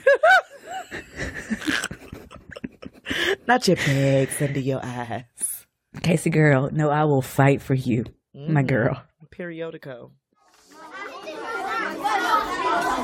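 No technical faults can be heard anywhere in this clip.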